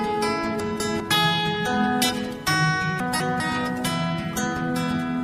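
Twice, a 200 ms chunk arrived one slot late, so the chunks play out of order at 0.6–1.0 s and 3.0–3.4 s, giving a jumbled moment at the hard joins.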